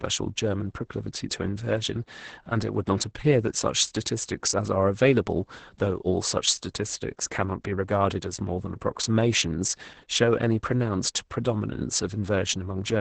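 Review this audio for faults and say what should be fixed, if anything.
Opus voice compression runs through the whole speech clip: the band stops near 8 kHz, and coarse excitation coding makes the voice hoarse and faintly robotic. A plain low-pass would only muffle it. The heavy damage points to a bitrate around 10 kbps. To prevent it, encode at a higher Opus bitrate or keep an uncompressed master.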